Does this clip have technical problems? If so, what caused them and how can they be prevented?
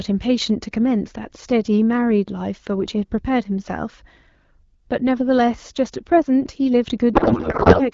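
Yes. From 7.14 to 7.90 s a codec payload misread turns the speech into garbled warbling noise that barely tracks it, consistent with octet-aligned AMR-WB frames being decoded as bandwidth-efficient. On a spectrogram, harmonic structure gives way to smeared, patchy energy. To prevent it, make both ends negotiate and use the same AMR payload format.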